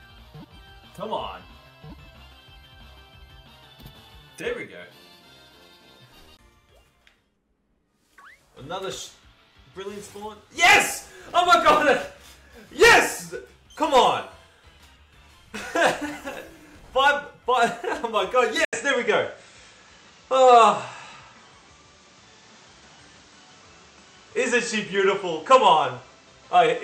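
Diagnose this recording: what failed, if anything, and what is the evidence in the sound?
At 18.65 s the audio drops out for about 80 ms, then returns duller and boxier. From there to the end, nothing sits above 8.4 kHz. The level shifts by roughly 5 dB, and a new noise floor appears, around 40 dB under the signal. The stage is capture. The likely cause is an input switched to a poorer device. The system swapped inputs mid-take, and the new path brings its own narrower band, tone, gain and hiss.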